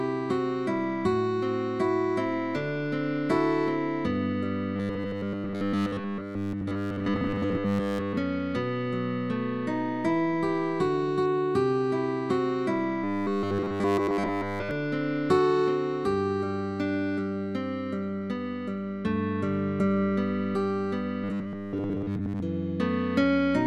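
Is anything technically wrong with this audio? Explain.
Yes. At 4.76 to 8.18 s, 13.04 to 14.71 s and 21.24 to 22.41 s the audio becomes a rigid, metallic 100 Hz buzz. This is robotic sound, likely from repeated short buffers, where a 10 ms slice loops in place of audio that arrived too late.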